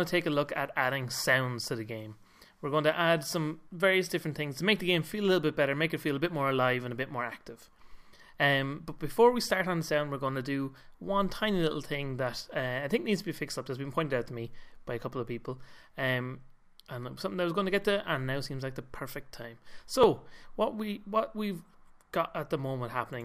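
At 20.04 s the sound jumps ahead by under two milliseconds of material, with no gap of silence. This is a dropped buffer (overrun): the program likely failed to collect a small block of samples before the hardware overwrote it, so the audio on either side was spliced straight together.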